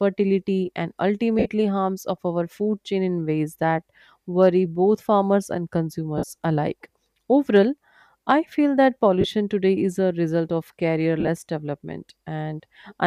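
Lost LE Audio frames: the link dropped 60 ms at 1.39 s before "harms of our food", 52.5 ms at 6.18 s, 30 ms at 9.21 s between "I feel that" and "today is a result", and scattered short runs from 11.20 to 11.29 s after "is a result of". Each time, the decoder repeated the last spectrum with random signs, so the speech briefly turns into a noisy smear.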